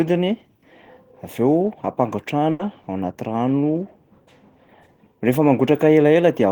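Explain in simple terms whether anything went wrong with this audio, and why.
Around 2.51 to 2.62 seconds the speech hits a burst of packet loss: a short run of the audio never arrived in time to be played. To hide the hole, the receiver stretched out the last bit of sound it had, fading it for about 80 milliseconds, and then the speech picks up again with about 80 milliseconds of it simply gone. Unlike a plain dropout, the gap isn't silent: it's smeared and fading, and the speech then jumps ahead.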